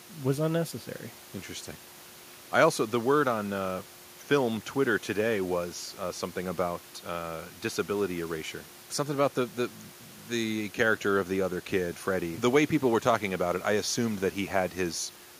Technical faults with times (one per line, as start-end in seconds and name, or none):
none